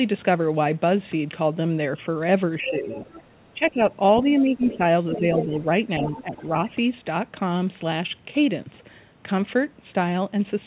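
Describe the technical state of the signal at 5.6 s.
Speech suppressed in double talk runs from 5.14 to 6.53 s, so 5.6 s sits inside it. With both ends talking at once, the echo canceller likely could not tell the near talker apart from the loudspeaker echo and pulled the whole microphone signal down. The talker's level sags intermittently, by around 5 dB at the deepest, for roughly 0.7 s in total across that span, so the sound dips rather than dropping out completely.

The other side's voice leaking through occupies 5.15 to 5.59 s and ends right at the moment asked about. Residual far-end sound from the loudspeaker, likely left behind because the canceller's estimate fell short during the double talk, rides under the talker at something like 10 dB below them. It is audible as a faint second voice in the narrow, 4 kHz-limited telephone band, then clears as 5.6 s arrives.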